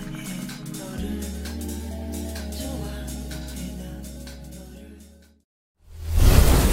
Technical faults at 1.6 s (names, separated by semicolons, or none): drift correction step